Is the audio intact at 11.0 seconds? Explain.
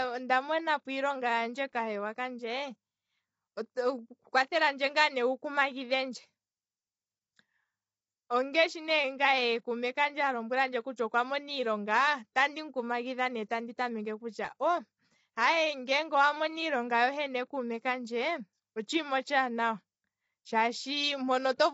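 No. At 10.97 s there is pre-echo: a brief hiss, spread over about 11 ms, arrives just before a sharp attack, softening it. Unlike a click or dropout, it is noise leaking forward within one codec block. Throughout, and so at this moment too, the sound is rough and grainy, with noise between harmonics and nothing above 7.8 kHz. This points to low-delay AAC compression, likely AAC-ELD at a rate that fits about 24 kbps, rather than plain band-limiting.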